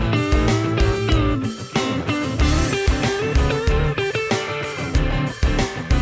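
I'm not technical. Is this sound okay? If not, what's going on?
Yes, this sound is fine, with nothing technically wrong to be heard in it. Nothing stands out as broken or out of place.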